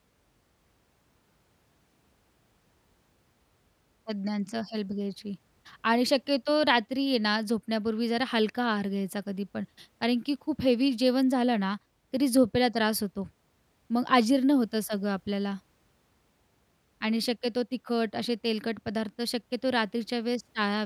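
Listening through the speech recording, nothing stood out as a technical problem at any point.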